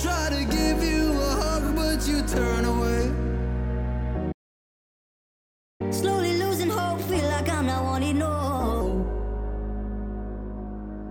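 The player likely ran dry or was blocked at 4.32 s, a playback stall. Output goes silent for about 1.48 s, until 5.81 s, then resumes. Catching up at higher speed, the player then resamples its backlog at 1.25 times normal rate from 5.81 to 8.81 s. Everything runs faster and sounds about four semitones sharp before settling back.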